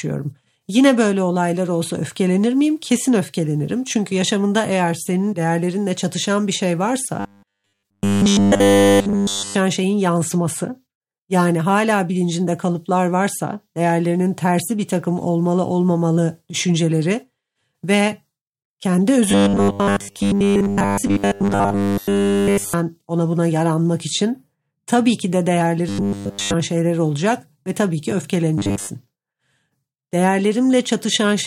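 From 7.20 to 9.55 s, 19.30 to 22.74 s (just before "ona buna yaranmak için"), 25.89 to 26.54 s (between "için tabii ki de" and "şeyler olacak ve tabii") and 28.58 to 28.91 s (after "olacak ve tabii ki"), the speech has robotic sound from repeated short buffers. It becomes a rigid 100 Hz metallic buzz, throughout the first three spans and for most of the last. The likely cause is starved input being covered by looping a 10 ms block.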